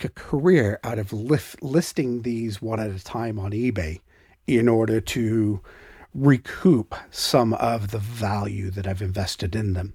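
No technical faults can be heard anywhere in this speech recording.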